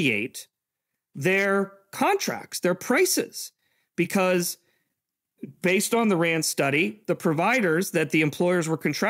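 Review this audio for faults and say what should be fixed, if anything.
Nothing to fix; no faults found in the audio.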